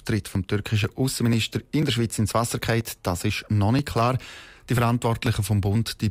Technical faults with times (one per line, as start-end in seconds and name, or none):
0.35-5.75 periodic USB or driver dropouts